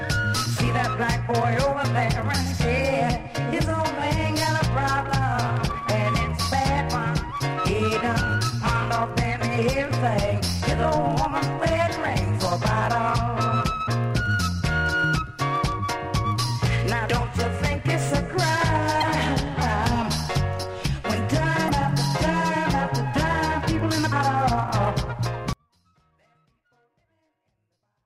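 Damaged data in a compressed stream shows up at 19.00–19.04 s, 21.66–21.70 s and 24.11 s: the decoder misreads frames, loses sync and briefly glitches. From 25.53 s to the end, an audio dropout to a faint residue leaves only faint sound roughly 35 dB down, likely from signal loss ahead of a path that stayed live.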